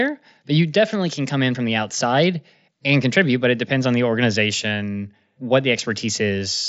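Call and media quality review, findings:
No faults found in this speech clip; the Bluetooth mSBC headset path carries it with content stopping near 7.7 kHz, consistent with a wideband Bluetooth call link.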